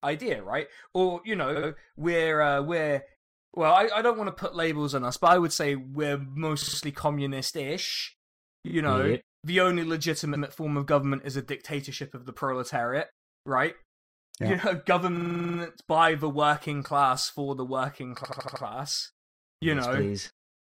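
Speech with repeated frames: short blocks of compressed audio play again, causing stutters at 1.55, 6.61 (after "I would say we're"), 8.67, 10.35, 15.16 and 18.23 s.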